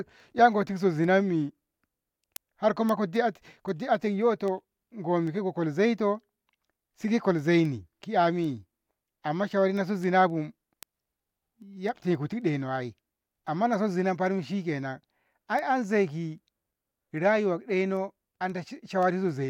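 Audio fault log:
0.25–19.29 s, word clock ticks: a steady train of around 70 sharp ticks of uneven strength, roughly one every third of a second, across the speech. The receiving device runs on its own clock, off from the sender's by roughly 70 parts per million, so each time the clocks slip a single sample is dropped or repeated and nearby samples are misread. On a spectrogram they show as evenly spaced thin vertical lines across all frequencies. On the waveform each is a one-sample step or spike.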